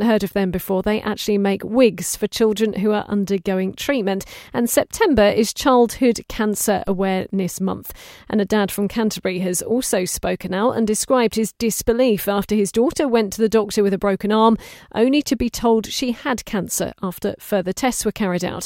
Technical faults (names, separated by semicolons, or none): DC step